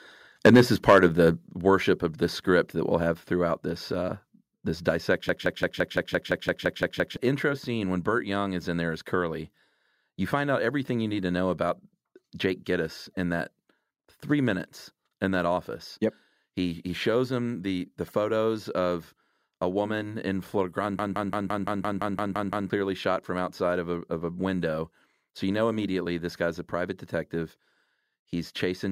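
From 0.45 to 0.61 s, the peaks are flattened, about 8 dB over full scale, with roughly a tenth of samples cut. It sounds harsh and crackly. Microphone overload is the likely cause.

At 0.47 s, the level drops suddenly by about 4 dB. This is a microphone volume step-down, likely the software cutting input gain after the distortion.

From 0.88 to 1.27 s, the overload returns, about 6 dB over, with only a small share of samples clipped. The crackle is milder.

At 1.48 s, a second step-down lowers the level by about 7 dB.

From 5.29 to 7.17 s, a system hang loop repeats one 170.67 ms fragment 11 times. This gives a 5.86 Hz machine-gun stutter and fits an 8192-sample ring buffer. Roughly two seconds of audio are lost.

From 20.99 to 22.70 s, the same loop recurs for 10 repeats, costing about 1.5 seconds.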